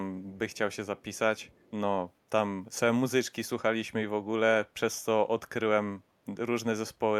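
A speech clip with faint, delayed ghosts of the speech trailing it at 0.50–0.57 s, 0.98–1.19 s and 1.37–1.71 s, lagging about 0.45 s and sitting far below the main speech. This echo leak is likely a far-end loudspeaker echo the echo canceller failed to remove.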